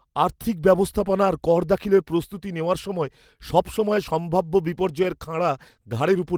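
Clock drift between sender and receiver runs through the whole clip: the sender's clock is about 3% slow, so the jitter buffer keeps draining and timing sags. From 0.14 to 6.17 s, repeated timing corrections fill the gap by repeating short pieces, stretching the speech to 97% speed and adding roughly a fifth of a second. They amount to small, unevenly spaced timing hiccups, and show as duplicated slivers and small splice discontinuities on the waveform and spectrogram.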